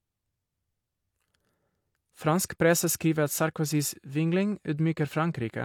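A short bit of speech, and nothing in it stands out as a technical problem.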